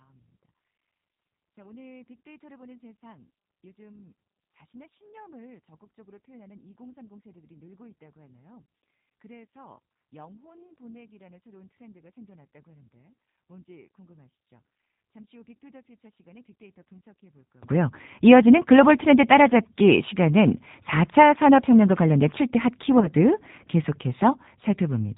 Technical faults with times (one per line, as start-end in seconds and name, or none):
0.00-25.17 G.729 codec
0.00-17.63 one channel inverted
23.00-23.08 VoIP packet loss concealed by the speech codec